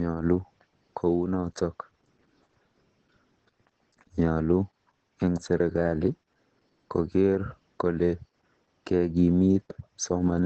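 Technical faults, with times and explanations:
Throughout, Opus voice compression. The speech sounds muffled, hoarse and slightly robotic. Nothing reaches above about 8 kHz, so the top of the band is missing and consonants lose their crispness. The character points to the SILK linear-prediction coder working alone at a very low rate, around 10 kbps. At that rate it models the vocal tract well enough but codes the excitation coarsely, and that coarse excitation gives the rough, buzzy texture.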